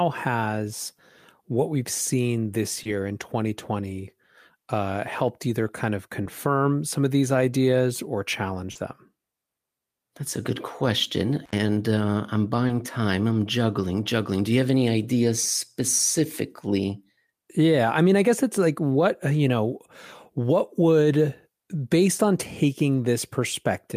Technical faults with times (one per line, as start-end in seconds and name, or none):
2.83-2.87 short concealed packet loss
6.23-6.27 short concealed packet loss
8.71-8.77 short concealed packet loss
11.44-11.54 intermittent contact
12.67-12.71 short concealed packet loss